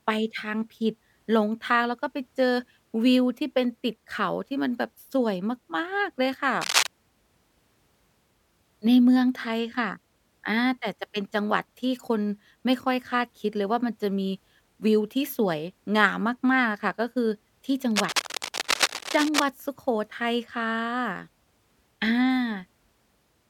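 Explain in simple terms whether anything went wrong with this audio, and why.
Yes. A worn cable or plug was likely being moved, making its electrical contact flicker. This cable scratch noise adds rough, scratchy rustling over the speech from 6.61 to 6.87 s, about as loud as the speech, and from 17.91 to 19.44 s, slightly quieter.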